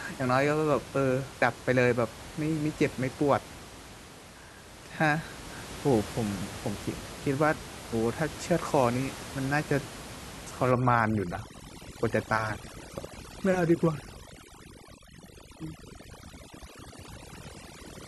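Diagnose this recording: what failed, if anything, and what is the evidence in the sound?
Overdone noise removal from 10.71 s to the end of the speech, a call-processing fault: the suppressor clamps every band sitting near its noise estimate, so the room noise, about 15 dB below the speech, collapses into near silence with twinkling specks.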